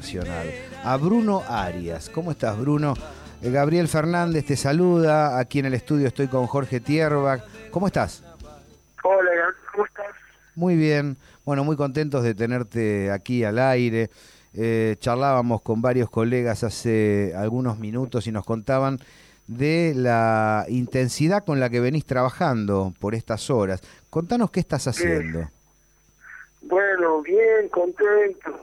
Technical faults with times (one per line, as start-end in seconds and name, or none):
none